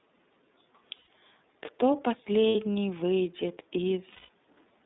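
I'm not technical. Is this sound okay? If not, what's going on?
No, not quite. The whole thing has gone through the iLBC codec, a compression scheme built for internet phone calls. It squeezes the sound into a narrow phone-style band, roughly 200 Hz up to about 3.7 kHz, so everything higher is gone and the speech sounds muffled and boxy. It also handles the sound in small 30 ms chunks, each coded on its own, which gives the voice a noticeably rough, slightly synthetic edge.

On top of that, you can hear three spots with lost iLBC frames, where bits of the call never arrived. At 0.96 to 1.08 s, 2.49 to 2.55 s, and 4.11 to 4.29 s, the decoder fills the hole by repeating the last tiny slice of voice with some noise mixed in, so you hear a short held, buzzy or breathy vowel. The longest one, near the end, fades as it goes. Their lengths of 120, 60 and 180 ms fit about four, two and six missing chunks. 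Because each chunk stands alone, the voice snaps back right after each gap.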